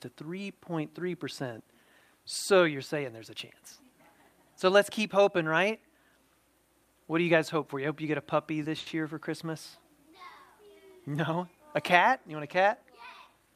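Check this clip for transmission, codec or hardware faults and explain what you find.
Two network faults stand out, both from the jitter buffer.

At 8.79 to 8.89 s there is a short stall from a late packet. The receiver stretched the last sound for 70 ms until the packet arrived, so it holds too long with a slight buzz or dip. Unlike a dropout, nothing is lost.

From 12.85 to 13.54 s a jitter buffer speed-up trims about 70 ms of pitch periods. The sound runs 109% fast but keeps its pitch, unlike a resampling error.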